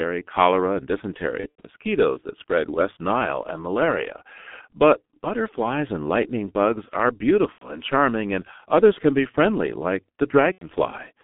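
From start to finish the speech sounds muffled and hoarse, with consonants smeared and nothing heard above about 3.5 kHz or below about 150 Hz. This is the G.723.1 codec at work, heavily damaging the signal. Its coarse 30 ms frames and slowly updated voice model cannot follow rapid changes in the speech, and the thin, rasping quality fits a stream of about 6.3 kbit/s.

At 1.41 to 1.68 s the sound briefly turns into a stretched buzzy tone or coloured noise that fades and comes back weak. This is VoIP packet loss concealed by the speech codec: about 150 ms of audio went missing, scattered over 240 ms with a longest gap of 90 ms, and the decoder filled the holes by repeating its last pitch and filter at falling gain. The same fade recurs at 7.52 to 7.70 s and at 10.52 to 10.64 s, each covering a loss of about 90 ms.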